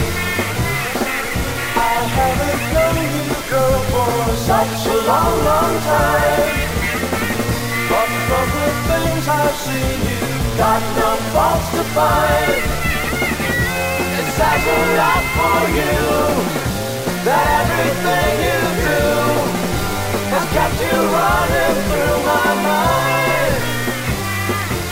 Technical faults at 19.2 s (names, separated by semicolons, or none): low bit depth without dither